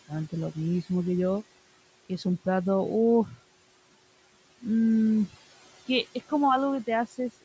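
From start to finish the speech carries noise suppressor artifacts. The room noise, sitting about 20 dB below the speech, is pushed down by about 18 dB wherever the suppressor judges a band to be steady noise, so it sinks in the gaps and swells back under each phrase. Unlike a noise gate, which switches the whole signal, this works band by band instead of making hard on-off cuts. The call's microphone processing, with nothing above 8 kHz, stays in the background.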